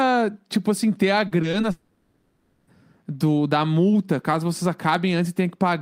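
From 1.27 to 1.65 s, just after "tipo assim ter a", the speech turns choppy, with several brief breaks of up to 40 ms. This is repeated packet loss: missing pieces were patched by extending the preceding sound, covering roughly a quarter of that stretch.

From 1.71 to 2.69 s, the sound smears into a sustained, fading buzz in place of speech and never falls fully silent, until the speech resumes with "do da multa caso". This is likely a long network dropout, with nearly a second of audio lost and filled in by stretching the last sound received.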